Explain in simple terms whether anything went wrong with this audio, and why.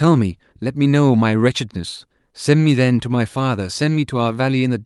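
Yes, something went wrong: the speech has clock drift between sender and receiver. The sending device's clock ran about one and a half percent slower than the receiving one, so the receiver kept running short of sound to play. Unlike a lost-packet dropout, which is a sudden isolated gap, this is a steady mismatch: it never goes away and always pushes in the same direction, toward stretching the sound out.

The result is repeated timing corrections from about 0.06 s to 4.3 s. To cover the shortfall, the receiver kept repeating tiny slices of audio, adding roughly a tenth of a second in total, so the speech plays at about 98% of its proper pace. The repeats are small and unevenly spaced. A single glitch would stand alone, but these come back again and again throughout.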